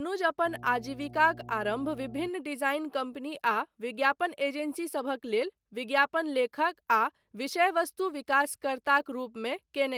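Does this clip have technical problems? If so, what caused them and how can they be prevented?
Yes: mains hum at 60 Hz runs from 0.43 to 2.31 s, ending just before "डिजाइन कम्पनी", roughly 20 dB under the speech. A ground loop or nearby transformer couples the power line in, showing as a flat horizontal line at 60 Hz on a spectrogram. Balanced cables, a single ground point and distance from transformers prevent it.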